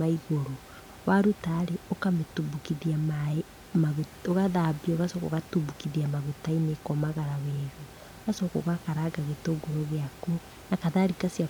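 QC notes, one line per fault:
Nothing to flag here; the speech comes through fine, with just the room's own background sitting about 20 dB under it.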